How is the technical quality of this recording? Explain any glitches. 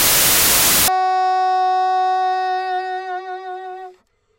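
The quality is compromised at the start. From 0.0 to 0.88 s, samples built from the wrong bytes: misassembled byte order promotes the jittery low bits, giving loud, harsh broadband noise rather than clipping's harsh distortion of recognisable sound.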